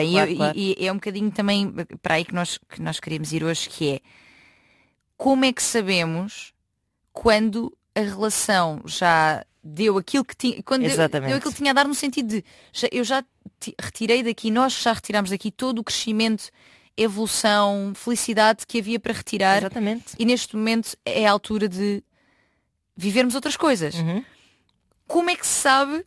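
Aliasing runs through the whole speech recording: the rate was lowered without an anti-alias filter, so content above 12 kHz folds back as gritty, metallic sibilance roughly 20 dB down.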